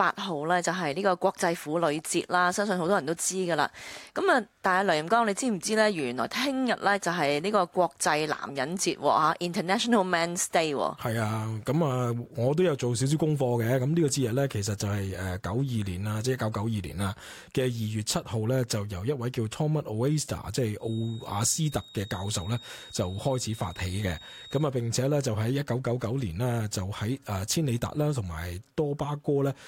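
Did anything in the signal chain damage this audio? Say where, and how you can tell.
Yes. A feedback whistle appears from 20.77 s to 24.72 s. It is a thin, steady tone at 3.8 kHz. It sits about 20 dB below the main sound and swells and fades slowly in level. The likely stage is the acoustic path at the capture end. A loudspeaker feeds back into the microphone with the loop gain just under the point of runaway. One frequency keeps ringing without growing into a howl.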